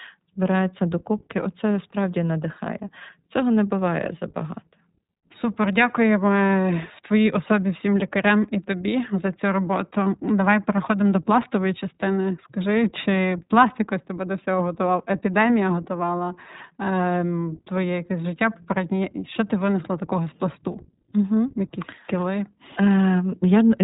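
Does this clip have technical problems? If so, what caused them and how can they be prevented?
Yes. Throughout, the speech sounds band-limited to about 3.8 kHz, with a plainly rough, synthetic texture. This is iLBC codec damage: each frame's excitation is coded independently, and the sound fits 15.2 kbps with 20 ms frames. To prevent it, use a wideband codec such as Opus at a higher bitrate.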